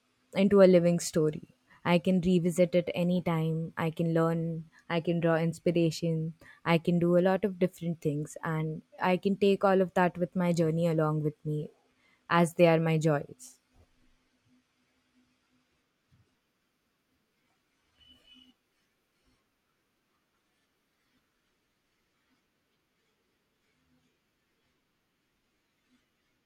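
Listening to the speech recording, nothing technically wrong stood out.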